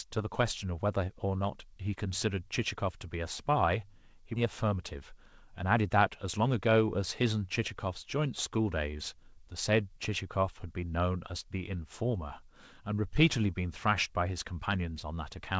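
At 4.36 s the audio skips ahead: roughly 0.7 s of speech is lost and the two sides are butted together with no silence or concealment filling the join. That distinguishes it from a dropout or packet-loss gap, where you hear a hole or a smeared fill. Here the sound simply lurches forward, as when a receive buffer overflows and discards audio it can no longer hold while newer audio is already queued.

Immediately afterwards comes a jitter buffer speed-up, from 4.45 to 5.98 s at about 107% speed, then again from 6.38 to 6.76 s at about 109%. Together they trim roughly 0.14 s by cutting out tiny pitch-period slices, so the delivery sounds rushed while the pitch stays put. A resampling or playback-rate error would raise the pitch with the tempo. Here only the pace changes, in two short bursts. Throughout, the G.722 call path carries nothing above 8 kHz.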